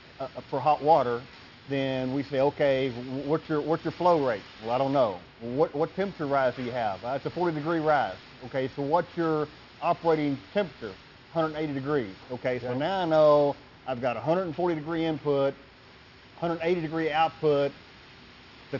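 Aliasing runs through the whole clip. The sample rate was lowered without filtering first, so content above the 6 kHz fold point, which fits a 12 kHz rate, mirrors back as unrelated pitches about 25 dB below the signal, sounding gritty or metallic.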